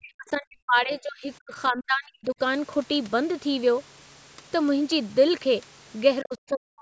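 From 0.0 to 2.4 s the speech keeps ducking and breaking up, falling by up to about 40 dB, then again from 6.22 s to the end. That's likely speech suppressed in double talk, with the echo canceller clamping down on the talker during overlap.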